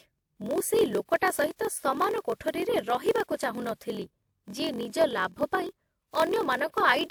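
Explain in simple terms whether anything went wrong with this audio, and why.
Something went wrong for the whole clip: a block size mismatch (padded). One step in the chain handed over audio in smaller chunks than the next step expected. The leftover space in each chunk was filled with silence. Those tiny gaps repeat about 43 times a second, so you hear a steady buzz under the speech. The gaps also stretch the audio, so the speech plays at about 0.94 times normal speed. The repeat rate fits a 1024-sample block.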